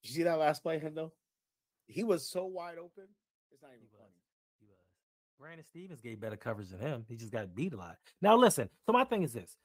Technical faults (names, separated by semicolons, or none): zipper noise